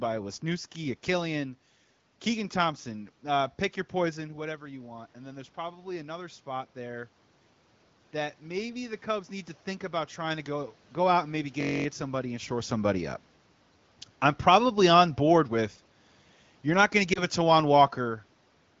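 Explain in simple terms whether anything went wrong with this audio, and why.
From 2.83 to 10.5 seconds the voice and its background slowly swell louder together, up to "go out and maybe". That is automatic gain rising: the phone's volume control judged the input too quiet and turned it up.

From 14.22 to 18.11 seconds everything gradually sinks quieter. That is automatic gain falling: the same control judged the sound too loud, or its background too noisy, and eased it down.

Around 17.13 to 17.19 seconds there is a brief dip or warble. That is lost AMR speech frames: one frame was lost to radio errors, and the decoder briefly filled the gap by reusing earlier sound.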